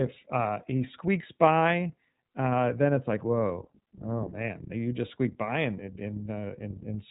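Throughout, the speech carries iLBC codec damage. Nothing above 3.8 kHz survives. Each 30 ms frame is coded alone, leaving a rough, synthetic edge that fits the 13.33 kbps mode.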